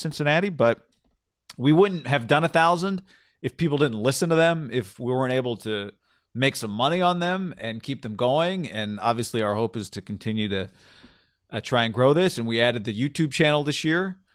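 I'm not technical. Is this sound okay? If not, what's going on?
Yes, no faults heard.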